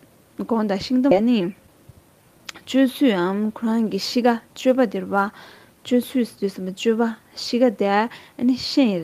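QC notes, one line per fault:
1.11 to 1.13 s, skip ahead: roughly 0.7 s of audio was dropped, either lost in transit or discarded when the jitter buffer overflowed with later audio already queued. Playback leaps forward with no fill, splicing the two sides almost directly into an abrupt jump.
1.21 to 1.93 s, jitter buffer speed-up: the buffer held more audio than its target, so the receiver repeatedly cut short pitch-period pieces, about 70 ms in total, to shrink the delay. The sound runs at 108 percent speed at unchanged pitch, coming across as hurried.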